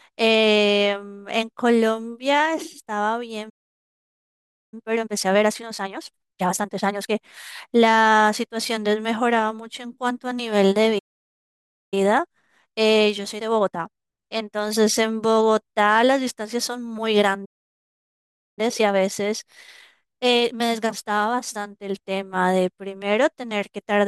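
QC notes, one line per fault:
3.49–4.74 s, 10.98–11.94 s, 17.45–18.59 s, playback stall: the player was likely starved of data or had its output thread blocked, so the speech cuts off mid-flow into silence for about 1.2 s, 0.9 s and 1.1 s respectively, then resumes.
4.74–7.18 s, 11.94–14.94 s, 18.59–21.59 s, time-compressed catch-up: after each stall the player sheds its backlog by cutting out short slices and cross-fading the joins. The speech runs hurried at unchanged pitch, at 1.5x, 1.1x and 1.15x.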